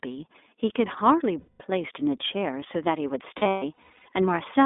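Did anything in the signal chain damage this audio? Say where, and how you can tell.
Yes. At the codec stage, iLBC coding limits the speech to roughly 250 Hz to 3.6 kHz throughout, with audible roughness; the 20 ms framing points to the 15.2 kbps mode.

At the network stage, lost iLBC frames leave buzzy, held-vowel concealment at 1.40–1.63 s (200 ms) and in scattered gaps over 3.38–4.07 s, the longest run roughly 150 ms.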